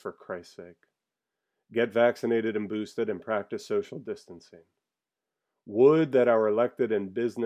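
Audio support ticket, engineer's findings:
Listened to the speech recording all the way and found nothing to flag, so there's no fault to log on this ticket.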